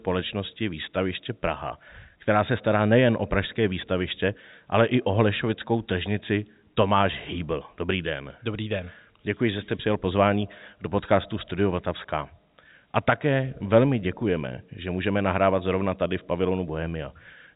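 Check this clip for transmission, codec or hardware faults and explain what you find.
No transmission, codec or hardware faults found; the speech carries the expected telephone-band character of G.711 coding, with nothing above about 3.8 kHz.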